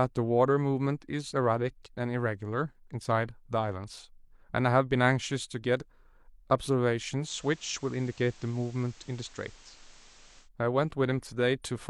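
Digital radio blending to analogue occurs from 7.19 to 10.49 s: the receiver lost its digital stream and cross-faded over about 0.1 s to the station's FM broadcast, then back. Hiss sits roughly 25 dB below the speech, with no change in level.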